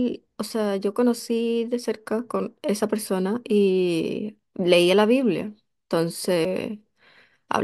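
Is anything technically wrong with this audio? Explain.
Yes, there's a CD skip in this speech clip at about 6.45 s. Something, either a knock to the player or a flaw on the disc, threw the laser onto another turn of the spiral track. The player muted for just a few milliseconds, then picked up reading from that other turn. You hear a small tick, and the speech jumps abruptly to a different spot, shifted by a whole number of disc rotations.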